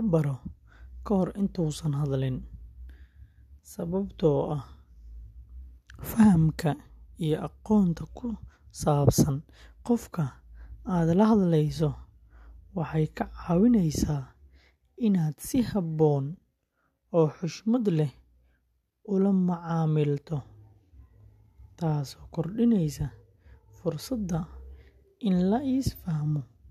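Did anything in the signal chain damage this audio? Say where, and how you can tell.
No, nothing along the signal chain audibly damaged this speech recording; every stage leaves the signal intact with no audible defects at any point.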